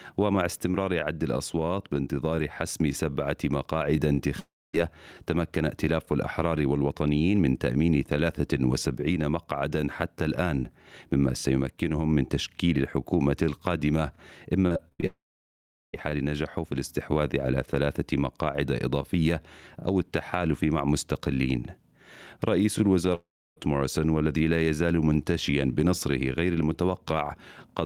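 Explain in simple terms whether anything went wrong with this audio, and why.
Yes, something went wrong. Three times the sound stops as a long network dropout, most likely because the connection briefly delivered nothing. At 4.39 to 4.75 s, 15.06 to 15.95 s and 23.15 to 23.58 s, the last bit of sound is stretched into a fading buzz, then goes quiet for roughly a quarter to three quarters of a second. When the audio resumes, the missing piece is simply gone. What sets these apart is one long hole each time.

Just before the middle dropout, from 14.67 to 15.04 s, there is repeated packet loss, which gives a robotic sound. Over about a third of a second the audio breaks six separate times, each gap no longer than about 64 ms. Every gap is patched by repeating what came just before, so nearly half of that stretch is filler. The result is choppy rather than silent, which is how it differs from a single long dropout.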